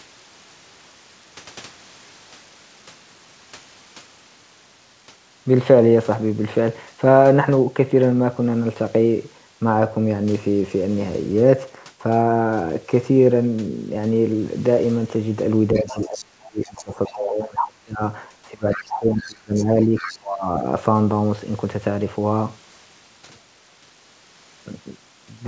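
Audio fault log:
15.75–16.25 and 16.63–17.12 s, other side's voice leaking through: a faint second voice sits around 20 to 25 dB under the talker. This is likely loudspeaker playback reaching the microphone that the echo canceller failed to fully remove.
15.8–18.02 s, speech suppressed in double talk: the talker's level drops by up to around 30 dB over roughly two seconds. The voice dips and breaks up while the other side is heard. The echo canceller likely could not separate the talker from the echo and turned both down.
18.51–20.65 s, speech suppressed in double talk: the talker again sinks, by up to around 25 dB, for about one and a half seconds in pieces. This is likely the same canceller clamping down while both sides talk at once.
18.71–18.84, 19.17–19.65 and 19.97–20.17 s, other side's voice leaking through: short scraps of the far voice come through, roughly 15 to 20 dB below the talker. 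They are likely residual loudspeaker echo escaping cancellation during the overlap.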